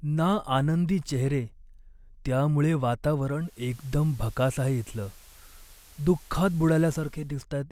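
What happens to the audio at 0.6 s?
Nothing goes wrong at 0.6 s; the speech carries on intact through that moment.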